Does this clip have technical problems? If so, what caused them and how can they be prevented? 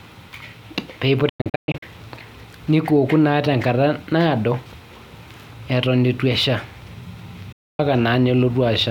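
Yes. The speech cuts to silence in scattered gaps from 1.29 to 1.83 s, the longest about 0.12 s, and again from 7.52 to 7.80 s, then resumes further on. A likely Bluetooth dropout, with late packets discarded. Keep the headphones close and clear of wireless interference.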